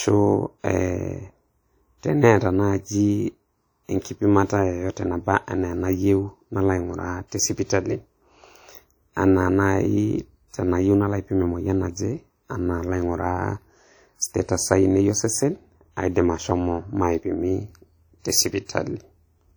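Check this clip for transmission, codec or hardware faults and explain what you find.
One codec fault runs through the whole speech recording, with plainly audible damage from start to finish. The likely cause is WMA compression, at a rate that fits roughly 48 kbps. This transform codec encodes the audio in long blocks, so quantisation noise is smeared across tens of milliseconds around each sound, and at this rate weaker spectral lines are discarded. The result is a ringing, washy quality with hiss that swells and fades along with the speech. Content still extends up to 20.1 kHz.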